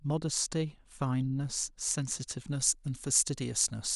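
From 2.49 s to the end, the speech turns suddenly thin, bright and hissy, with sharpened sibilants. This is pre-emphasis left on: a treble boost, consistent with the CD 50/15 µs curve, was never undone, leaving about 8 dB of extra level at 10 kHz relative to 1 kHz.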